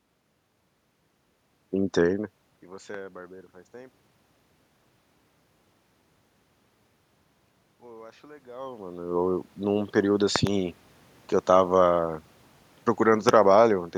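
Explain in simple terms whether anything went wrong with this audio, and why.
Loud pops at 2.94 s, at 10.36 to 10.49 s (two in quick succession), and at 13.29 s: sharp clicks sit on top of the speech, likely from a sudden electrical jolt such as a plug, switch or static.

Automatic gain rising from 7.81 to 10.01 s: the recorder judged the input too quiet and slowly turned itself up, so speech and background swell together. Around 8.5 s the talker also shifts position, which is natural and not a fault.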